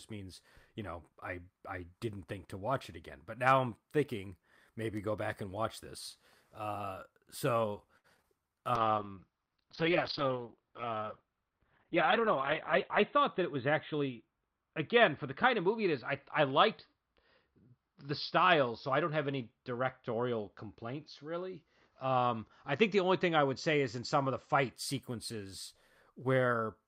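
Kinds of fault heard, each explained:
Repeated packet loss (robotic sound): from 7.97 to 8.25 s, four lost stretches are patched by extending prior sound, giving choppy speech rather than clean dropouts.
Call bitrate drop: from 8.76 s the encoder falls from 48 to 7 kbps and bandwidth narrows from 20 to 4 kHz, sounding muffled and watery, not choppy.
Jitter buffer speed-up: between 12.95 and 14.09 s the speech runs about 4 percent faster at unchanged pitch, with a few tens of milliseconds trimmed, unlike resampling.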